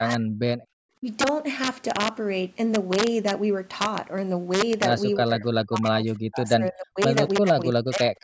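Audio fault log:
throughout: integer overflow. Loud speech peaks driven about 4 dB past the limit wrap to the opposite sign, giving sharp cracks on a small fraction of samples, harsher than clipping's flattened tops.
0.00–0.46 s, 1.01–1.06 s, 5.18–5.45 s, 5.62–6.99 s, 7.41–8.24 s: speech suppressed in double talk. The speech dips by up to roughly 40 dB, likely from an echo canceller ducking during crosstalk.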